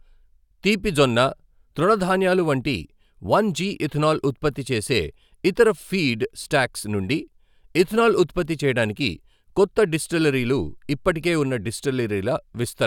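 No technical faults occur anywhere in the audio, so there is nothing to describe in time order.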